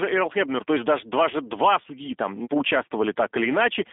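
The speech has passed through a G.729 codec for its whole length, consistent with the 8 kbit/s G.729A variant. Rather than carrying the waveform, the codec rebuilds each short frame from a vocal tract filter, a pitch predictor and a few pulses, so the sound comes out plainly rough and slightly synthetic. The line band runs from about 250 Hz to 3.6 kHz and nothing passes above 3.8 kHz, leaving the speech thin, boxy and dull.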